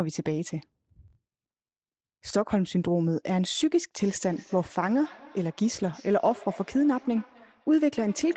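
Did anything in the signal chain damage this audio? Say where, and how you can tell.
Yes. From 4.0 s to the end of the clip there is feedback echo between two devices, a fault in the call stage. Each stretch of speech returns about a third of a second later, at about 23 dB below the speech, and each copy sounds thinner and more ringing. Another device in the room is playing the call aloud into this microphone, and the local echo canceller removes only its own playback. On a spectrogram, which stops at 8 kHz from the call's normal microphone processing, fainter copies of each syllable trail behind at that steady spacing.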